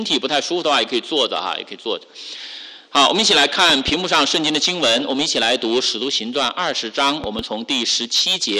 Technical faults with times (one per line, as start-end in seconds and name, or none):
3.70-3.91 loud pop
7.24-7.42 loud pop